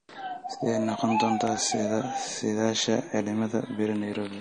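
From the first moment the speech carries a watery, swirling texture, with sibilants turning metallic and nothing above 9.6 kHz. The likely cause is MP3 compression at a low bitrate, around 40 kbps by the sound of it: the encoder cuts the treble at a fixed point and drops weak frequency lines that flicker on and off between frames. Unlike a plain low-pass filter, which only dulls the top, this damage warbles and chirps.

Between 1.47 and 1.70 s comes an irregular burst of scratchy crackle, the sign of loose connector crackle. A worn or dirty contact makes and breaks its connection many times within that fifth of a second, chopping the signal. Its uneven spacing and rough texture set it apart from the even, regular ticks of digital clicks or buffer dropouts. It is confined to this one stretch, whereas the codec damage runs through the whole clip.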